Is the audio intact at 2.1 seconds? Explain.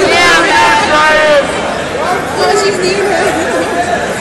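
Yes, at 2.1 seconds the audio plays through cleanly with no dropout, click, distortion or other fault.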